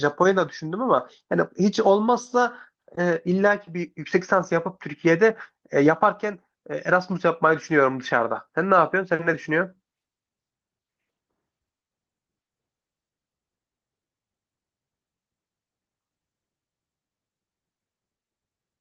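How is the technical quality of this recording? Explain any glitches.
Listening to the whole recording, nothing stood out as a glitch or technical problem.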